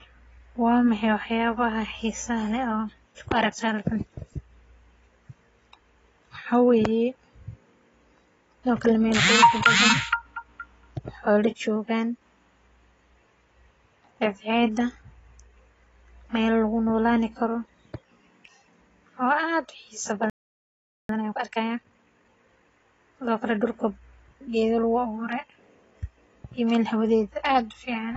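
Speech runs through the whole clip with a dull, smeared quality and a fizzy, warbling edge on sibilants and held vowels, which points to AAC compression, most likely AAC-LC at a low rate that fits a bitrate around 24 kbps. A spectrogram would show a lowered ceiling on the high frequencies, plus patchy gaps and blotchy fill in the upper bands where the encoder dropped detail or swapped it for noise. At 20.30 s the sound cuts off mid-flow and stays silent until 21.09 s, a gap of about 0.79 s that sounds like a playback stall, the player having likely run out of data before it recovered. On a waveform this is a flat line where the sound stops abruptly and later resumes. From 21.09 s to 22.67 s the speech comes back hurried at about 1.5 times normal speed with its pitch unchanged, a time-compressed catch-up in which the player clears its backlog by cutting out small slices and cross-fading the remainder. 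The waveform would look denser there, with syllables packed closer together, while the spectrogram's harmonics stay at their usual heights and the rhythm of the speech tightens.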